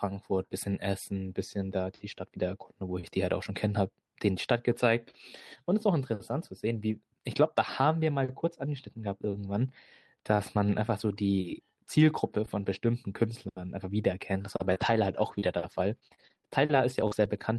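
From 14.57 s to 17.39 s the speech breaks into repeated packet loss with a robotic sound. Eleven short gaps, the longest 39 ms, are each patched by stretching the preceding sound. Because they recur every few hundred milliseconds, the result is choppy and robotic rather than one clean dropout.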